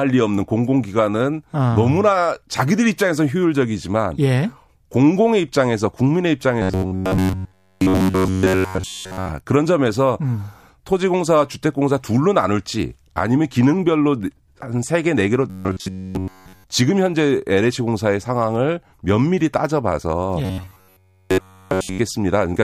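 Three times the speech turns into a rigid, metallic buzz fixed near 94 Hz that only loosely tracks the words: 6.62 to 9.29 s, 15.50 to 16.64 s and 20.45 to 21.99 s. This robotic sound from repeated short buffers is likely caused by audio arriving too seldom, with the last roughly 11 ms replayed in place of essentially all of the real signal.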